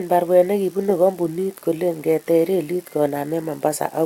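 Nothing goes wrong anywhere in this bit of speech, so there's no technical fault to point to.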